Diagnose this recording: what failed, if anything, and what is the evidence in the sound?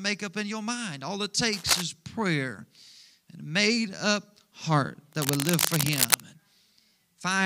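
Cable scratch noise at 1.53–1.82 s and 5.13–6.20 s: ragged rustling bursts about as loud as the speech, likely a worn analogue cable or connector shifting contact resistance.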